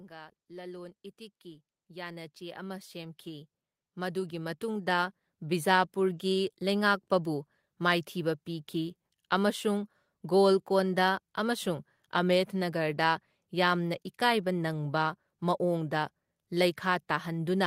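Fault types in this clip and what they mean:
Automatic gain rising: the automatic gain control judged the incoming level too low and kept turning its gain up, adding about 19 dB between 0.08 and 5.93 s. Because the boost is applied to everything the microphone picks up, the speech and the background noise grow louder together in a slow, steady swell over those six seconds, rather than the talker seeming to move closer or raise their voice.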